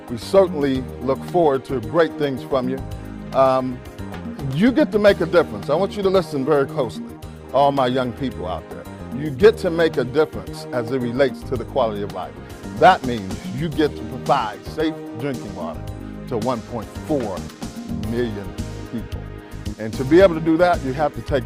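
The sender's clock runs faster than the receiver's, by around four percent, so throughout the clip the jitter buffer keeps overfilling and the receiver must discard material to keep up. Repeated timing corrections run from 0.13 s to 21.45 s, trimming short pieces at uneven intervals, giving a slightly rushed pace, about 104% of normal speed.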